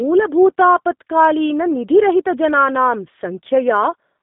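Throughout, the speech has G.729 codec damage. It fits an 8 kbit/s G.729A stream, which sounds rough and synthetic, with a 150 Hz to 3.7 kHz band and nothing above 3.8 kHz.

From 0.31 s to 4.08 s, faint clock slip clicks tick about every 0.3 s. Each one is likely a single-sample slip between unsynchronised clocks differing by roughly 70 ppm.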